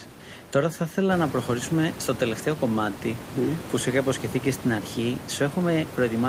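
Nothing in this speech recording stood out as a technical problem on listening, with the room's background noise, which rises about a second in and sits roughly 11 dB below the speech, belonging to the space where it was recorded.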